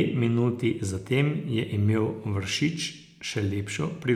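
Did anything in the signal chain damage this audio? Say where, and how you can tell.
No, no damage is audible.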